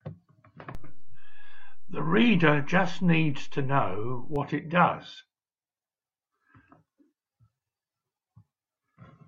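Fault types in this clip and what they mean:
DC step: the waveform's zero line jumps to an offset of about -27 dBFS at 0.75 s and returns at 4.36 s, each shift heard as a low thump. Unlike a dropout, the speech carries on unchanged; only the baseline moves.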